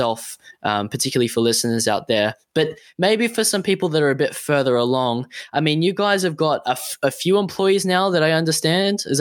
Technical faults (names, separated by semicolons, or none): none